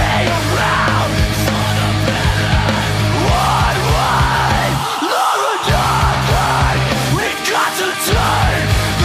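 No technical faults can be heard anywhere in the audio, and the signal holds steady throughout.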